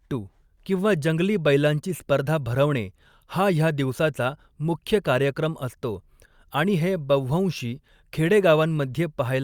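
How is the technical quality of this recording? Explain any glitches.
Nothing here jumps out as a glitch; the speech comes across steady and unbroken, with no technical faults to point to.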